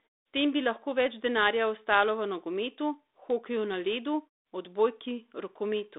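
No faults to report: nothing in the audio calls for a timestamp or a fix.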